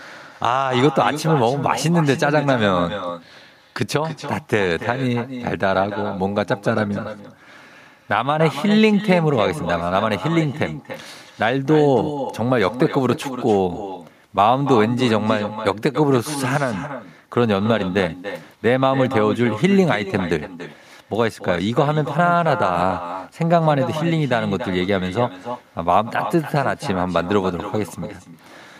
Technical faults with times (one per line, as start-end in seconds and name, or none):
0.00-28.80 echo with no canceller